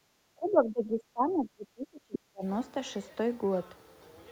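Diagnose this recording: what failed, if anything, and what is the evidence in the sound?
The opening of the clip shows background gated by the echo canceller, a call-processing fault. From 0.00 to 0.06 s the room sound drops by about 19 dB and then comes back. The drop lasts about 70 ms. The canceller clamped the microphone while it judged the loudspeaker active. Unlike a network dropout, the signal is attenuated rather than replaced by silence or concealment, and it recovers smoothly once the canceller releases.

From 0.34 to 2.43 s the talker's speech dips, sinking as far as about 30 dB down. Around two seconds of speech is affected in total. This pattern is likely speech suppressed in double talk, again in call processing. With both ends active, the canceller treated the near talker as echo and pulled the microphone gain down. A codec or packet-loss fault would smear or glitch the sound, whereas here it is pumped in level.

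Between 2.14 and 2.19 s a second voice briefly breaks through, sitting roughly 10 dB below the talker. This is the other side's voice leaking through, most likely residual echo the canceller failed to remove from the microphone path. It falls inside the double-talk stretch, when the canceller's adaptation is most easily disturbed. Crosstalk in analogue wiring would persist steadily, whereas this leak appears only as a short scrap.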